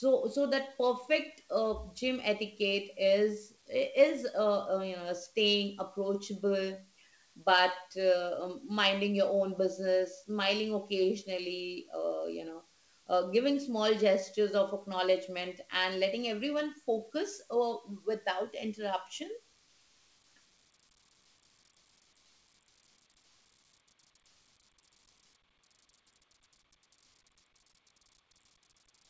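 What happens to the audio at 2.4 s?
At 2.4 s the speech comes through intact, with only the call path's ordinary wideband coding and nothing above 8 kHz.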